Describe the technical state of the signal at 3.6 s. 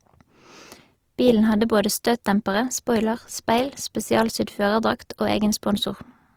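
At 3.6 s the speech carries grainy, rough texture, likely from Opus compression in music mode. It persists throughout. Starved bands get filled with noise, consistent with roughly 24 kbps.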